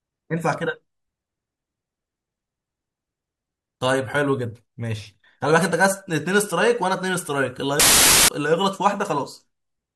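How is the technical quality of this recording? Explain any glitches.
The recording has one clear glitch, a short burst of corrupted audio near the end. Wrong sample width, from 7.80 to 8.28 s: 32-bit integer samples are read back as packed 24-bit values, so most numbers are built from mismatched bytes. The speech is heard buried under loud noise, slowed to 0.75 times speed and lowered in pitch.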